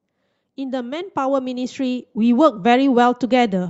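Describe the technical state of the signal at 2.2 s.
At 2.2 s you're in the middle of an automatic gain rise running from 0.55 to 2.7 s. The gain control decided the input was too quiet and keeps pushing its gain up, about 10 dB in total, so the voice and the background noise swell together.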